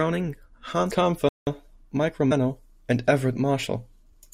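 A playback stall cuts into this speech clip at 1.29 s: the audio drops to silence for 183 ms, until 1.47 s, before carrying on. The likely cause is the player's buffer running dry or its output thread being blocked, leaving nothing to send until it recovered.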